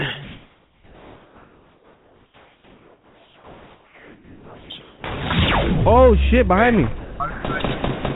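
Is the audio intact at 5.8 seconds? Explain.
No. At 5.8 seconds, like everywhere else in the clip, there's sample clock jitter. The converter's clock wobbles by something under a microsecond, so each sample lands a touch early or late, and the timing error turns into amplitude error wherever the waveform is moving fast. You hear it as a faint hiss or grit riding on the louder, brighter parts, roughly 50 dB down, even though the call path's band tops out at 4 kHz.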